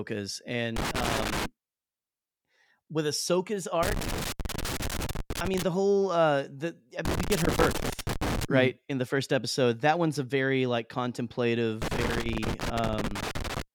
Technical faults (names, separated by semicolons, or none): loose connector crackle